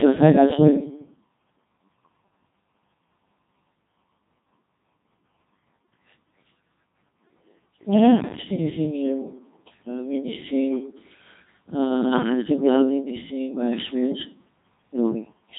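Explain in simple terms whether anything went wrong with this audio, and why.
The whole clip has been through the Codec 2 vocoder, which rebuilds the voice from simple tones, so it sounds robotic and buzzy, not merely muffled, with nothing above 3.8 kHz.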